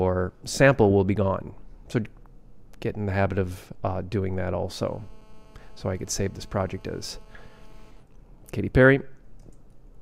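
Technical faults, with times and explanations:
4.74–7.91 s, GSM phone buzz: A hard, raspy buzz at 217 Hz, about 32 dB below the signal, carries a dense stack of harmonics and bears no relation to the audio. A nearby 2G phone in a call transmits radio bursts 217 times a second, and the audio circuit rectifies those pulses into sound. Unlike mains hum, which is smoother and sits at 50 or 60 Hz, this is gritty and buzzing, and it holds steady as a call does rather than flickering like data traffic.
7.97–8.99 s, GSM signalling bursts: The continuous buzz gives way to even ticks with a longer 217 Hz buzz twice a second, roughly 40 dB down. The phone is still in the call, but its user has gone silent, so it sends only short groups of radio bursts instead of a continuous stream. The audio circuit rectifies each group into a tick or a short buzz. The rhythmic grouping and the 217 Hz buzz within each tick set this apart from random clicks or crackle, and the gaps between groups set it apart from the steady call buzz just before.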